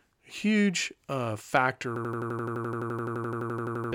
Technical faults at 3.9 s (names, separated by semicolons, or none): system hang loop